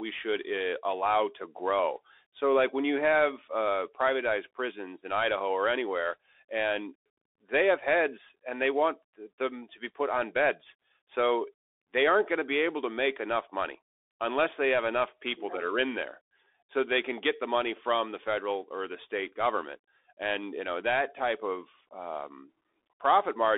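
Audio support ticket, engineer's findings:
Bluetooth CVSD headset codec, whole clip. Speech band-limited to roughly 300 Hz to 3.6 kHz. Nothing above. Scratchy s sounds. Granular hiss under the speech. Loud bright passages distort. Component: headset link, narrowband voice profile. Mechanism: one-bit up/down delta coding, consistent with a 64 kbps stream. Adaptive step lags fast high-frequency swings. Slope overload, quantising grain. Damage plainly audible throughout.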